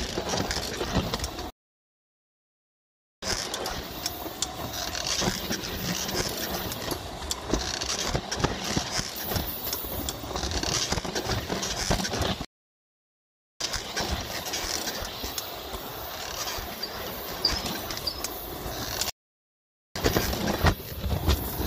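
Playback stalls at 1.50 to 3.22 s, 12.45 to 13.61 s and 19.10 to 19.96 s cut the sound mid-flow into silence lasting 1.7 s, 1.2 s and 0.86 s. The player likely ran short of data or had its thread blocked before output resumed.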